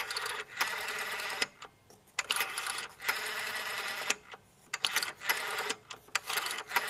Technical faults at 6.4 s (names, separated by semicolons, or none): none